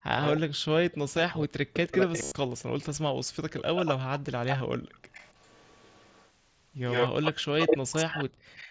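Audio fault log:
0.24–0.30 s, 1.94–2.64 s, 3.57–6.30 s, 6.88–8.70 s: echo leak. A delayed copy of the sound returns behind the original. The delay is 263 ms in the first two spans and 103 ms in the last two. It sits about 15 dB down at first and about 10 dB down later, and near the end it is slightly louder than the direct sound. Because it is a repeat at a fixed lag, it differs from reverberation. The likely cause is a far-end loudspeaker whose echo canceller let its microphone pickup through.
0.36–3.01 s and 7.67–8.13 s: speech suppressed in double talk. The talker's level dips hard, by roughly 40 dB at the deepest, and loses pieces over about 2 s in the first span and about 0.3 s in the second. Both spans overlap the echo. The likely cause is an echo canceller that could not separate the talker from the returning echo while both were active, so it turned both down. Here the talker is what drops, not the room.
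2.23–2.32 s and 4.58–4.60 s: concealed Bluetooth headset packet loss. The first gap, 82.5 ms long, fits about 11 lost 7.5 ms frames. It is filled with a repeated short stretch of waveform, so it sounds like a buzzy tone held at full level, followed by a slight warble when real audio returns. The second gap, 22.5 ms long, covers 3 lost frames. Because the level holds through the gap, this differs from the suppression dips.
4.78–4.92 s and 8.41–8.54 s: background gated by the echo canceller. The room sound briefly drops out, by about 32 dB and about 34 dB, for roughly 150 ms each time. It comes back as the canceller releases its hold on the microphone. This differs from double-talk suppression because the ambience vanishes, not the talker's sound, and the dropout is a short, abrupt hole rather than a prolonged, patchy dip.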